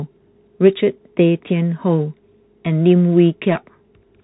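A speech clip that runs through a Bluetooth CVSD headset codec from start to finish, and the damage is plainly audible. Everything above about 3.9 kHz is gone, giving that boxed-in phone-line sound. CVSD sends just one up-or-down bit per sample with an adapting step, which fits a 64 kbps link. Loud high-frequency bits outrun the step and distort, s sounds come out scratchy, and a grainy hiss sits underneath the speech the whole way through.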